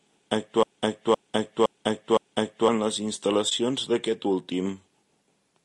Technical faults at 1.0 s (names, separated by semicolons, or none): low-delay AAC compression; broken-record loop